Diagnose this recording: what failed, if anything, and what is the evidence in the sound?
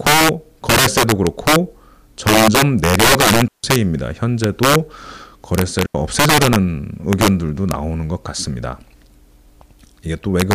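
Violent cracks burst from the loudest speech peaks throughout: integer overflow at the sample-format stage. Gain pushed peaks about 10 dB past full scale, so a few percent of samples wrapped to the opposite sign instead of limiting.

Clean holes of near silence, with no noise around them, open at 3.48 s for 157 ms and at 5.86 s for 86 ms. These are digital wireless dropouts: the receiver lost too much data and muted with a very short fade.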